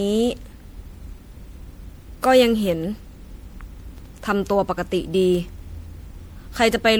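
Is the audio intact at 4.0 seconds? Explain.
No. From 3.80 to 4.11 s the processor misses its buffer deadlines in a row, and the skipped audio fits a run of about seven 3 ms buffers. This is processor overload crackle, a gritty tearing over the speech. Throughout, repeated MP3 re-encoding, likely around five passes at 96 kbit/s, causes generation loss that makes the speech swirly and hollow, with smeared attacks.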